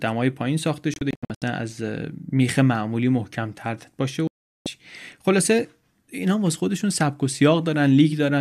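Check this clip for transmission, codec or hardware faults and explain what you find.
Two digital broadcast dropouts affect this speech. From 0.94 to 1.42 s, and again from 4.27 to 4.66 s, the receiver lost frames and muted. The first leaves scattered gaps totalling 264 ms, the longest 72 ms. The second is a single 384 ms silence.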